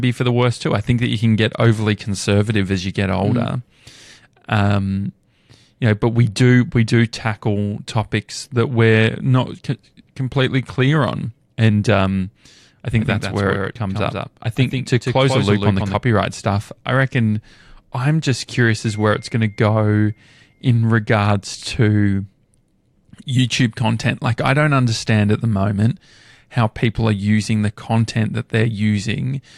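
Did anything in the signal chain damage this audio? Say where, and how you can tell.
Yes. A doubled audio track runs 13.0–16.0 s, after "on and um I" until "stuff I reckon I'm". A dry copy trails about 150 ms behind, roughly 5 dB quieter, likely from a slower second capture path. Spectrograms show each syllable ghosted, starting and stopping abruptly.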